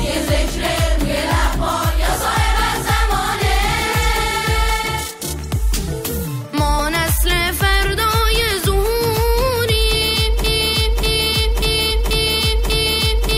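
Around 6.78 s there's a short smeared blip where the audio jumps ahead a touch. That's compressed frames being skipped: the decoder either never got a frame or threw it out as damaged, so playback lands a bit later than it should. The gap sounds like roughly one frame's worth, about 20 ms, which fits a 21.3 ms frame. Because neighbouring frames overlap, you get a soft smudge instead of a hard click. The same thing happens again at 8.40 s, also about one frame.

From 10.44 s to the very end, the sound turns into a broken-record loop. A 0.59 s fragment plays over and over, back to back, five times, and whatever should have come next is simply gone. Most likely the player or stream stalled and kept resending the last chunk it had buffered.

Inside that loop, at 11.90 s, there's a bigger skip of compressed frames. It's still a smeared jump, but it drops around 100 ms of audio, which points to about five frames going missing at once.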